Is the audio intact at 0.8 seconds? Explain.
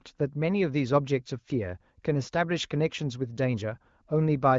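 Yes, at 0.8 seconds the audio is intact, with no fault at that moment.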